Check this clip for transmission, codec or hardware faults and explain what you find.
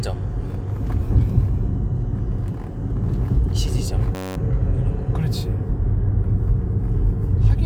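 There's one hardware-side fault. From 4.15 to 4.36 s you get a system hang loop: the machine stalled while the audio device kept replaying its ring buffer, so a 10.67 ms slice, which fits a 512-sample buffer, repeats about 20 times, giving a steady buzz near 94 Hz before the sound resumes with virtually nothing missing.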